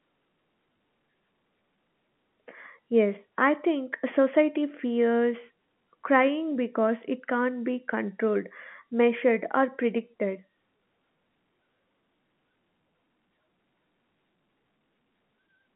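Nothing stood out on listening to this speech, which comes through a narrow telephone-style band with nothing above about 3.8 kHz.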